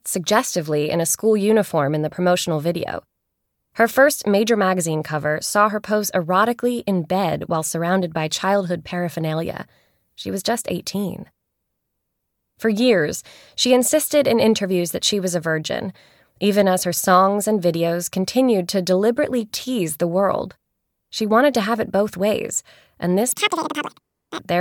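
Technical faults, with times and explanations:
23.32–24.39 s, audio read two samples at a time (double speed): the sound suddenly rushes forward at twice its proper speed, jumping a full octave (12 semitones) higher. The reader treated each pair of samples as a single frame, as if the data held two channels or samples twice as wide, so material plays out in half the time.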